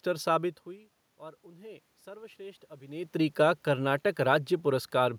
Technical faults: automatic gain rising

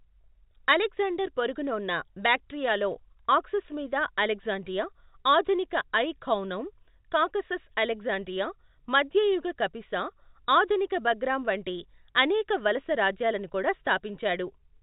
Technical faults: none

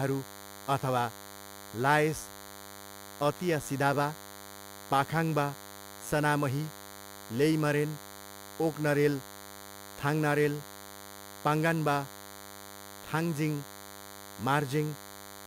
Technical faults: DECT cordless phone buzz

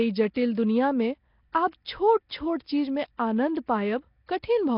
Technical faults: Nellymoser compression; pre-echo

